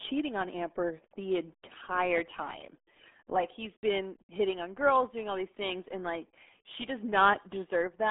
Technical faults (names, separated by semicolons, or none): RealAudio 14.4 codec